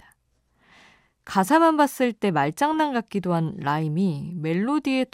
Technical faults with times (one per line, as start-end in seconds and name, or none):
2.74 DAB burbling